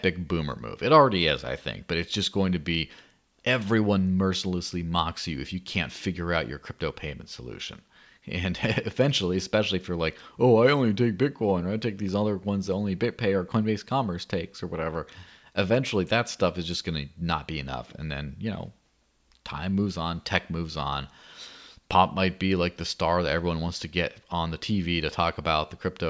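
No technical faults are audible anywhere in it.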